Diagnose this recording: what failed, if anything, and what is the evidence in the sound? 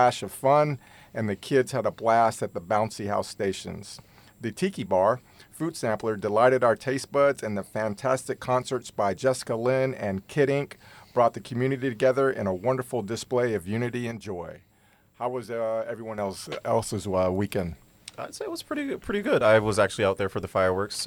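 At 14.12 s the whole signal drops abruptly by about 6 dB, sound and background noise together, and at 16.18 s it snaps back to the previous level, with no fade at either edge. Because the noise floor moves in lockstep, the change happened after capture, in the digital path. A sudden gain jump like this is likely a gain setting or one-bit shift applied instantly in the driver or processing stage, since halving the amplitude gives exactly that 6 dB step.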